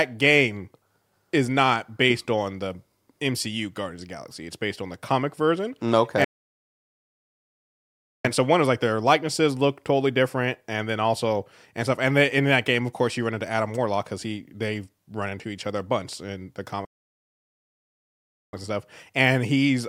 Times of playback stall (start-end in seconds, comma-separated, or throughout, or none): 6.24-8.25, 16.85-18.53